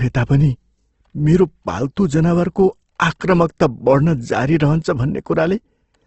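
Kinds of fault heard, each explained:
Opus compression: The speech throughout has a grainy, rough texture with noisy band-filling in place of clean harmonics, and the spectrum stops sharply at about 8.2 kHz, a wideband limit. The damage is plainly audible. This is likely Opus low-bitrate coding in its music-oriented mode, which fits roughly 16 kbps, where the encoder keeps each band's energy but fills under-budgeted bands with folded or noise-like content instead of leaving gaps.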